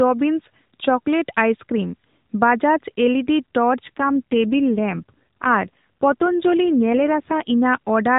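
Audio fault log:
3.88–7.53 s, AMR rate drop: the narrowband sound turns rougher and buzzier, consistent with the mobile codec stepping down from 12.2 to 5.9 kbps. On a spectrogram the 4 kHz ceiling holds and nothing drops out, but harmonics blur and fine detail thins until recovery.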